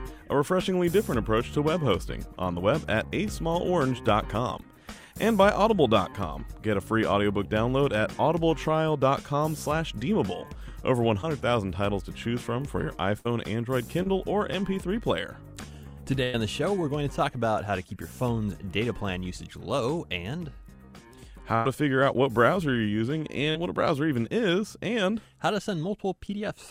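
At 11.21 to 11.25 s there is a short concealed packet loss. About 20 ms of audio never arrived in time, and the receiver bridged roughly 12 ms of it by extending the preceding sound before crossfading back. It is heard as a brief smear or wobble. The same happens at 14.03 to 14.07 s, with 27 ms synthesized over a 20 ms hole, and again at 23.51 to 23.57 s, where 38 ms covers a 40 ms gap and produces a slightly longer wobble.

At 13.19 to 13.27 s a burst of packet loss removes about 60 ms of consecutive audio. The concealer extends the last sound for about 61 ms and lowers its level as the gap continues, giving a held buzz or fading hiss before playback resumes further on. Two larger bursts follow, at 16.23 to 16.35 s and at 21.55 to 21.67 s. Each drops about 100 ms and fills it with roughly 97 to 99 ms of decaying continuation.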